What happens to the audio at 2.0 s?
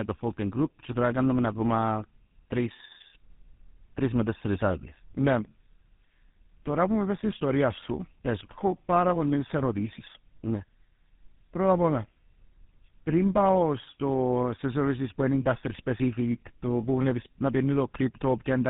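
At 2.0 s the speech carries tandem speech coding, which runs through the entire clip. The signal was coded with GSM full rate at 13 kbit/s, passed as G.711 mu-law at 64 kbit/s, then coded with GSM full rate again, so the second coder re-encoded the first coder's errors. The result is a rough, muffled, warbly quality with nothing above 3.8 kHz, heavier than a single GSM pass would leave.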